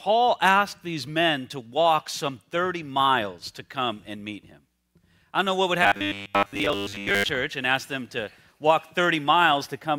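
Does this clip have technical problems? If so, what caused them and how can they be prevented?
Yes. From 5.83 to 7.30 s there is robotic sound from repeated short buffers: most of that stretch is a rigid 100 Hz buzz. This fits a 10 ms block being looped when new audio likely arrived too late. A spectrogram shows an evenly spaced comb of harmonics at 100 Hz, and the waveform repeats identical cycles. Prevent it by enlarging the jitter buffer or by concealing gaps with fades or interpolation instead of looping.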